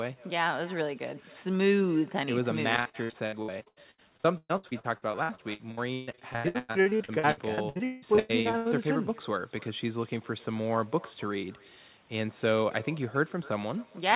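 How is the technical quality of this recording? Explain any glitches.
The speech carries two clear faults over a telephone-band path whose sound stops at 4 kHz, which fits a G.711 codec.

Echo with no canceller runs throughout: the far end's loudspeaker feeds its microphone, so every phrase returns roughly a third of a second later, about 23 dB quieter and thin.

Repeated packet loss (robotic sound) spans 2.76 to 8.67 s: dozens of gaps, the longest 171 ms, are patched by stretching prior sound. About 39% is concealed, giving choppy speech with pieces missing.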